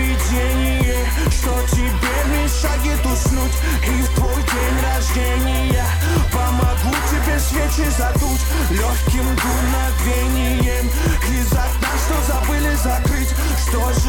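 Nothing in the audio stood out as a technical problem on listening.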